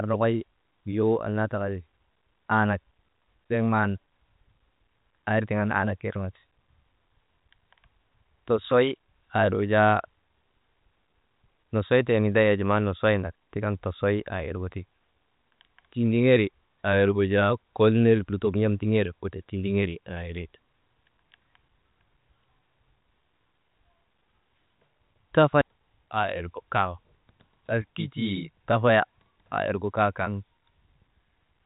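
Speech over a G.711 telephone-coded path, band-limited to nothing above about 3.8 kHz as that format requires, with no technical fault present.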